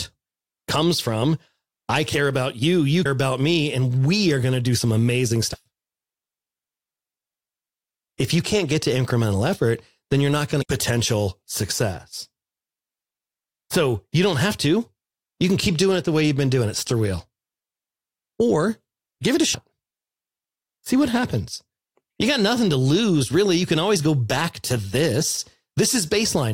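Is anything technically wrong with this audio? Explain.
Yes. Damaged data in a compressed stream causes short blips in the speech at 3.04 s, 5.53–5.55 s, 10.61–10.64 s, 16.86 s and 19.53 s. Corrupted bytes make the decoder misread frames and lose sync until it finds the next frame header, producing each brief blip of about 20 ms.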